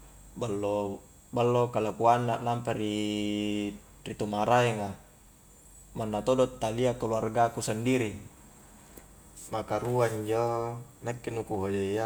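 No technical faults are audible.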